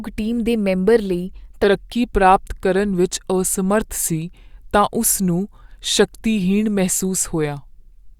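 From 1.64 s, after "ਟੀਮ ਦੇ ਮੈਂਬਰ ਲਈ", the rest is a section at the wrong speed. It plays at 0.893x, about two semitones lower, likely resampled to a mismatched clock.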